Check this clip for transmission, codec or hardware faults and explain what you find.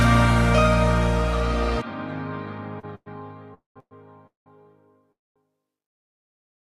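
Two kinds of transmission fault appear, both jitter-buffer underruns. No audio is lost, but gaps are inserted and playback falls progressively later.

Short stall from a late packet, 2.79 to 2.85 s: a packet missed its playout deadline and the buffer emptied. The receiver extended the last sound by about 37 ms before resuming from the same point. It is heard as a brief held sound with a faint buzzy edge, adding 37 ms of delay.

Call audio freeze, five times: 2.95 to 3.08 s, 3.54 to 3.78 s, 3.80 to 3.93 s, 4.27 to 4.48 s and 5.12 to 5.38 s. Each fills between 109 and 236 ms. The last sound is continued as a fading buzz that drops to silence for 40, 140, 60, 150 and 220 ms respectively, and then the audio resumes where it stopped. The likely cause is packets held up in transit, which drains the buffer each time.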